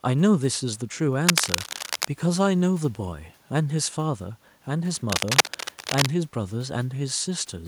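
From 1.27 to 2.07 s, a burst of scratching noise sits over the speech at roughly its level. A worn cable or connector being moved is the likely cause. This is cable scratch noise. A second burst runs from 4.95 to 6.10 s. It is equally loud and rough. Background room noise sits well below the speech throughout.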